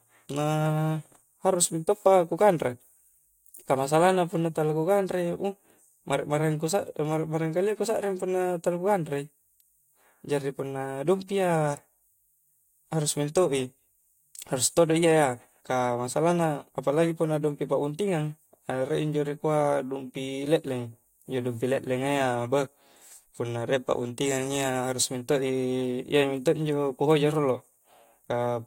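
No technical faults can be heard anywhere in this speech recording. There is nothing in it that needs a timestamp or an explanation.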